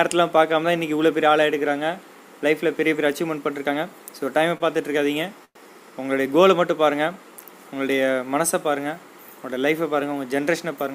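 Short stall from a late packet, 4.57 to 4.77 s: a packet arrived late, so the jitter buffer emptied and the receiver held the last sound for about 27 ms until it came. Playback resumed from the same point with nothing lost, leaving a briefly stretched sound with a faint buzz or dip.

Call audio freeze, 5.45 to 5.58 s: the sound halts and a fading fill runs for about 106 ms, the last 70 ms of it silent, before playback picks up exactly where it stopped. Packets held up in transit, likely emptying the jitter buffer, would explain the inserted gap.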